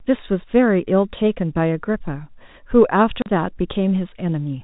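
At 3.22 s the speech drops into a hole about 40 ms long, ending at 3.26 s: packet loss filled with silence. Audio that never reached the receiver was replaced by silence, and the gap's length fits two lost 20 ms packets. Unlike concealment, which smears or repeats the preceding sound, nothing bridges the gap, so both edges cut abruptly. The narrow telephone band from the G.711 coding continues unchanged on either side.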